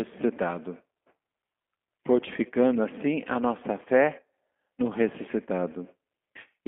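From start to finish it's G.729 codec damage: a narrow 200 Hz to 3.4 kHz band and a rebuilt, slightly rough, synthetic speech texture, fitting an 8 kbit/s link.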